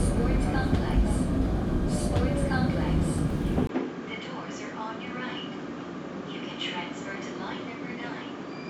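At 3.67 s there's a brief 20 ms dropout, then the sounds turn duller and roughly 10 dB quieter, with nothing above 7.6 kHz and a faint new hiss underneath through to the end. That points to the input likely switching to a poorer device.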